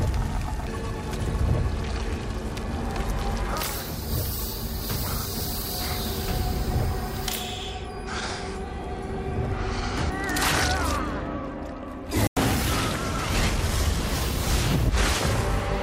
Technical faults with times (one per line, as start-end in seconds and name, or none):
12.27-12.37 digital broadcast dropout